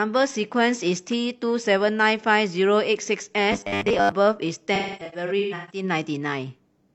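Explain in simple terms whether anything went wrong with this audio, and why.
Two separate problems can be heard.

From 3.52 to 4.13 s the speech turns into a rigid, metallic buzz at 100 Hz that still roughly follows the talking. This is robotic sound from repeated short buffers. The likely cause is audio arriving too slowly, so the playback software kept replaying the last sliver of sound instead of the real audio. Most of that stretch is repeats. The buzz pitch points to slivers about 10 ms long being looped.

From 4.75 to 5.83 s there is AAC frame loss with concealment. Chunks of the compressed audio went missing, about 640 ms in total, spread over roughly 0.94 s, with the longest gap around 0.3 s. The decoder patched each hole by guessing from the last good sound, so the speech there comes out smeared, noisy and hollow rather than clean.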